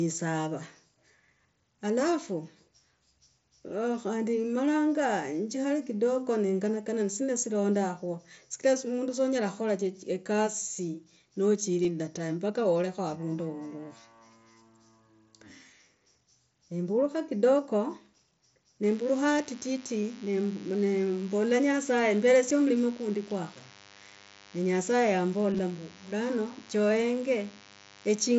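Speech carried over a wideband mSBC headset link, with band-limited 8 kHz content and light graininess on loud sounds, suffers concealed Bluetooth headset packet loss at 11.83 s (about 15 ms replaced), 22.50 s (7.5 ms) and 25.53–25.59 s (30 ms lost across 60 ms, longest run 15 ms). On a waveform these show as repeated pitch-period copies, and on a spectrogram as brief smeared harmonic patches. From 18.83 s to the end, a DECT cordless phone buzz, roughly 25 dB below the speech, comes from rectified 100 Hz radio bursts. It appears as evenly spaced horizontal harmonic lines and a steady low ripple on the waveform.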